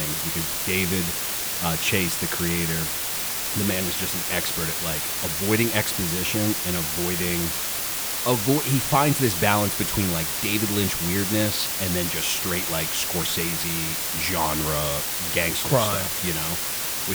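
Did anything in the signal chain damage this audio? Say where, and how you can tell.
Yes. The damage happened at a sample-format conversion, where the speech was reduced to low bit depth with dither, about 4 bits. Dither randomises the rounding error, so instead of grainy distortion that tracks the signal you hear a steady, even hiss for the whole clip, roughly as loud as the speech itself. A spectrogram shows a flat, uniform noise floor across all frequencies, with no gaps between phrases. The waveform never settles to silence.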